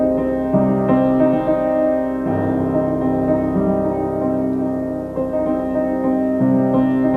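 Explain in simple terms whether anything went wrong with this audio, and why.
Nothing went wrong that I could hear: on listening, nothing in this audio stood out as a problem.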